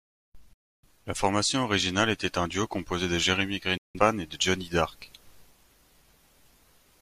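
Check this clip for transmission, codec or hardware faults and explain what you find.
Two digital broadcast dropouts: 0.53–0.86 s and 3.77–3.99 s, before "et de". Failed frames trigger a near-instant mute, about 3 ms, leaving clean silence, not hiss or stutter. The programme resumes later, with the lost audio gone.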